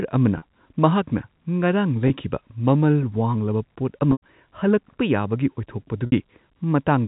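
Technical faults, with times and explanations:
0.38 s, 2.08 s (just before "ꯃꯃꯜ ꯋꯥꯡꯂꯕ ꯄꯣꯠ"), 4.12 s (just after "ꯃꯃꯜ ꯋꯥꯡꯂꯕ ꯄꯣꯠ") and 6.06 s, packet loss with pitch repetition: the speech briefly freezes into a buzzy, held tone in gaps of 40, 20, 100 and 60 ms. The gaps are multiples of 20 ms, which fits 20 ms packets. The receiver fills each gap by looping the last pitch cycle and fading it out. At 4.12 s that fade reaches near-silence before the speech cross-fades back.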